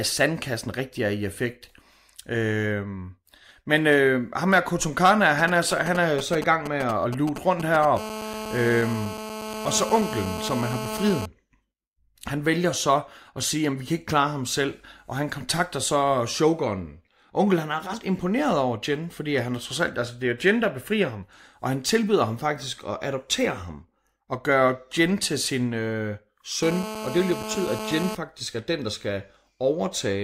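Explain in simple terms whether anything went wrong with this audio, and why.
Something did go wrong: a 2G mobile phone near the recording equipment leaked into the audio twice over.

From 5.39 to 7.85 s there are GSM signalling bursts. The phone was only exchanging brief messages with the network, and the audio circuitry picked up those radio pulses and turned them into sound. The result is a galloping dit-dit-dit of short buzzes, fairly loud against the speech and unrelated to it.

Right after, from 7.97 to 11.26 s, and again from 26.63 to 28.15 s, between "til sin øh" and "er den der skal", there is GSM phone buzz. Here the phone was in a call, transmitting 217 times a second without pause, so the same pickup produces a steady, harsh, raspy buzz at 217 Hz, rich in overtones and clearly audible under the speech.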